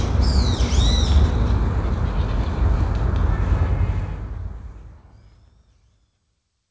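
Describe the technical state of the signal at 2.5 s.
At 2.5 s the audio is intact, with no fault at that point; it has passed through a G.722 call path that leaves nothing above 8 kHz.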